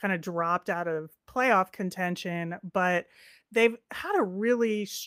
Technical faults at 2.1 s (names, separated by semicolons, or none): none